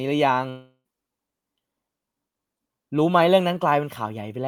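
Speech clip with a likely long network dropout from 0.49 to 0.88 s: the receiver extends the last sound as a fading buzz or hiss for about 350 ms, then about 60 ms of near-silence, and speech resumes with roughly 360 ms of audio lost.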